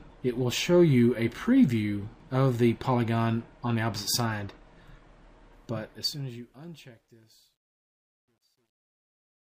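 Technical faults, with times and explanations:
5.53–9.51 s, truncation distortion on a fade: as the fade-out that begins around 5.5 s drops, the undithered low bits are discarded, which fits an 11-bit word length. From 6.86 s the waveform collapses into coarse steps, giving a gritty sound.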